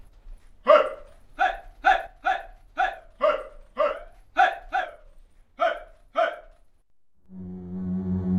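At 2.07 s the sound abruptly drops by about 6 dB and stays at that lower level to the end of the clip. The likely cause is one channel dropping out. With one stereo side gone, whatever both channels shared loses half its contribution to the mono sum, and anything present only in the missing side vanishes. A simple gain change would also lower the level, but it would keep every element of the sound. Here the step is instant rather than a fade.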